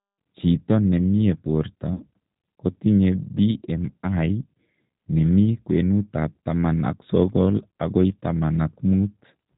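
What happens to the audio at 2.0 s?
Right around there, from 1.94 to 2.04 s, you get VoIP packet loss concealed by the speech codec. About 60 ms went missing, which fits three lost packets. The decoder stretched its last pitch and filter into a buzzy tone or coloured noise that fades, and the speech stays weak briefly afterward. Underneath, the G.729 codec at 8 kbit/s gives the speech its slightly rough, synthetic edge, with nothing above 4 kHz.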